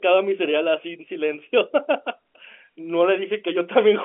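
The speech arrives as ordinary G.711 A-law telephone audio at 64 kbps, held to a line band of about 200 Hz to 3.4 kHz with nothing above 3.8 kHz, and no technical faults can be heard in it.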